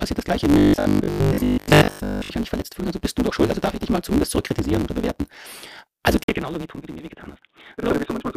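A speech recording with three faults. Throughout, a block size mismatch (truncated) means one stage writes longer blocks than the next reads, which fits a 512-sample write, so each block's tail is discarded. The result is a steady 138 Hz buzz, and the speech runs 1.6 times fast at roughly normal pitch. From 0.54 to 2.32 s, new audio is likely arriving too rarely, so the last 20 ms is looped while most of the real audio is skipped. That produces robotic sound from repeated short buffers, a rigid metallic 50 Hz buzz that only loosely tracks the speech. At 6.24 s the input is likely switched to a poorer device. After an 80 ms silence, the sound turns dull and boxy, drops about 5 dB, and carries new background noise about 55 dB below the speech until the end.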